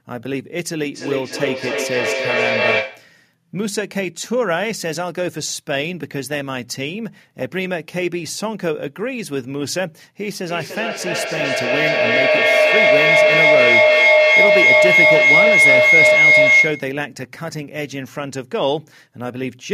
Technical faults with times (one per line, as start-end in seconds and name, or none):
0.92-3.22 feedback echo between two devices
10.46-17.05 feedback howl